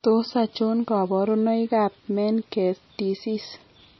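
Throughout the speech, nothing above 5.9 kHz, and heavy watery, swirling artefacts point to likely MP3 compression, consistent with a low bitrate around 24 kbps. Weak frequency lines flicker between frames. Plain low-pass filtering would dull the treble without that swirl.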